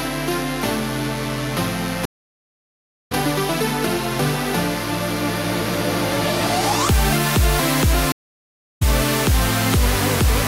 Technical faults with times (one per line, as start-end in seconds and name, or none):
2.05-3.12 stream reconnect
8.12-8.82 stream reconnect